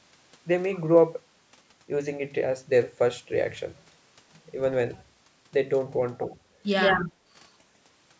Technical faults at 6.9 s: echo leak; speech suppressed in double talk

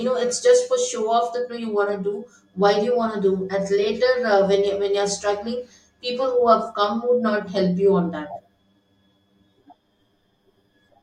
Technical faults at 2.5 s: channel delay (comb filtering)

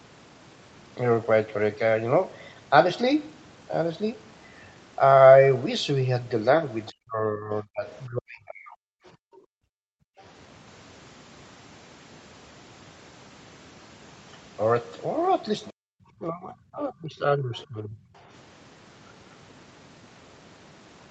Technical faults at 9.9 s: background gated by the echo canceller

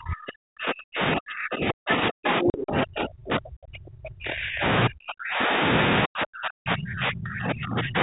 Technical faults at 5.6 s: speech suppressed in double talk

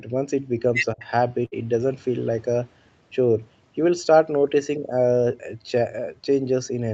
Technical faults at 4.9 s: none

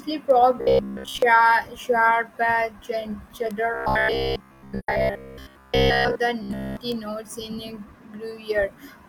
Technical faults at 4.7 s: robotic sound from repeated short buffers; AAC frame loss with muting

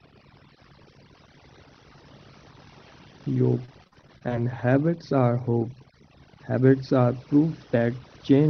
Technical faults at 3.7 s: overdone noise removal; repeated packet loss (robotic sound)

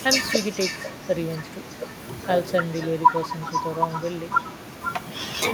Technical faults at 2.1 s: echo with no canceller

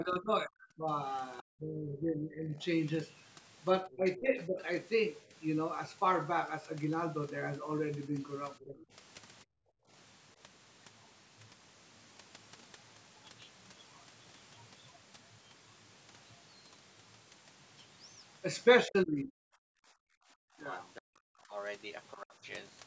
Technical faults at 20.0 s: other side's voice leaking through; speech suppressed in double talk; background gated by the echo canceller

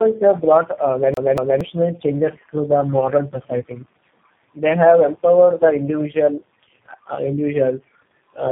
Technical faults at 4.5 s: tandem speech coding

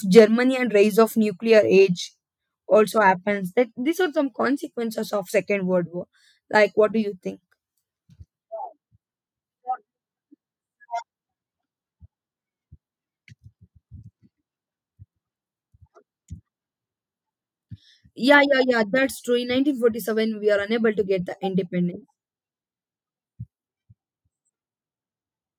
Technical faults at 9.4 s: none

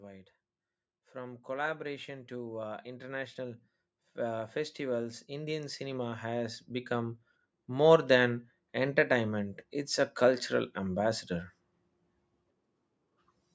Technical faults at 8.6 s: automatic gain rising

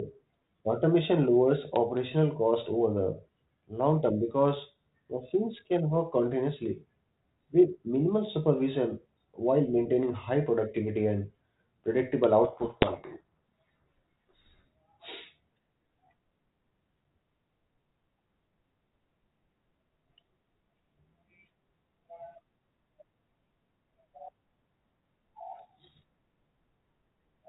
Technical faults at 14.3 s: codec payload misread

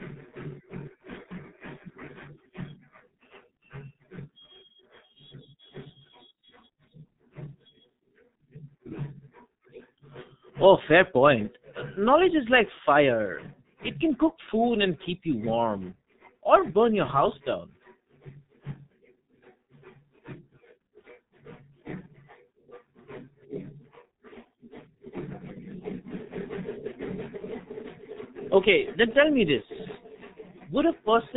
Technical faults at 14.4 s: block size mismatch (padded); G.723.1 codec

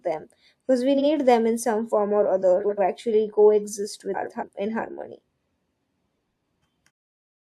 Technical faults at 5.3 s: none

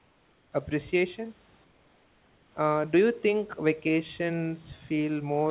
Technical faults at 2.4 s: comfort noise in place of the background

